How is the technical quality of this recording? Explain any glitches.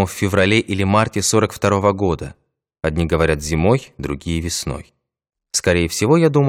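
Nothing in the recording stood out as a technical problem on listening, so there are no glitches to explain.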